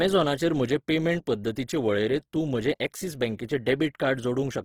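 From start to finish the speech is grainy and rough, with band-filling noise rather than MP3-like swirl and full bandwidth kept: likely Opus compression near 16 kbps.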